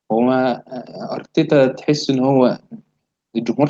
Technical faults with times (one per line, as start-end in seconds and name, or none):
1.48-2.65 automatic gain rising